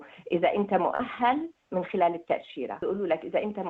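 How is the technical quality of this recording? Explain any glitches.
The recording has one audible glitch, a short concealed packet loss from 0.95 to 1.01 s. About 40 ms of the stream failed to arrive in time, and the receiver filled roughly 37 ms of that hole by extending the sound just before it, carrying on its pitch where it was tonal or substituting shaped noise where it was not, then crossfading back into the real signal. It comes across as a brief smear or wobble, and a very short sound inside the gap can vanish.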